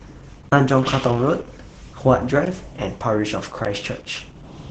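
From the start, the speech carries Opus voice compression throughout. The band stops near 9.5 kHz, so the top end is dull. The SILK linear-prediction coder is doing the work here, modelling the voice and coding its excitation coarsely. The damage is heavy. Voices sound muffled and hoarse, with a faintly robotic edge. That level of loss fits a low rate of about 10 kbps.

At 0.49 s a block of digital silence cuts in and lasts 32 ms, to 0.52 s. The samples were zeroed, probably because the output buffer was not filled in time. The sound drops straight to nothing and returns with no fade. The result is a short hole.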